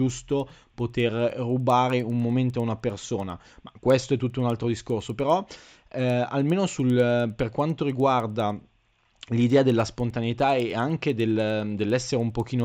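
A speech recording carrying a steady tick at 10 Hz for its full length, heard only while there is signal: a resampler restarted on every block. Each 100 ms block was converted from 16 kHz to 48 kHz in isolation, leaving a small error at every block edge.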